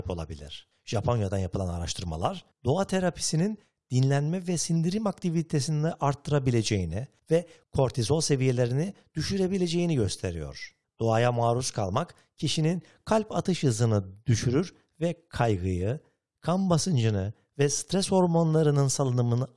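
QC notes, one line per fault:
No faults heard in this speech recording.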